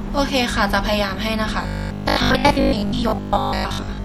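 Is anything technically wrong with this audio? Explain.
Yes. From about 1.63 s to the end, the speech turns into robotic sound from repeated short buffers: a rigid, metallic buzz at 50 Hz that only roughly follows the original speech. The likely cause is audio arriving too seldom, so a 20 ms chunk is replayed while real speech is skipped, for most of that stretch. A spectrogram would show evenly spaced vertical striations every 20 ms and energy locked to multiples of 50 Hz. The waveform would show near-identical 20 ms blocks repeating.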